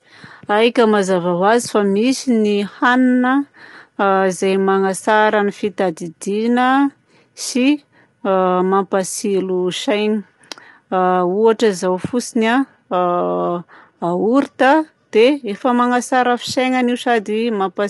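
Low-delay AAC compression runs throughout this speech clip, with plainly audible damage: the voice sounds rough and grainy, noise fills the gaps between its harmonics, and nothing is present above 11.6 kHz. The likely cause is a low-delay codec such as AAC-ELD, whose very short frames cannot separate closely spaced pitch harmonics well, so each frame burns bits inefficiently, and the harshness fits a rate around 32 kbps.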